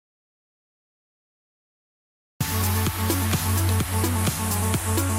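Audio dropout to silence runs from the very start to 2.41 s: the input was likely lost or muted while recording continued, so those first 2.4 seconds are silent with no room tone, and the sound enters abruptly mid-flow.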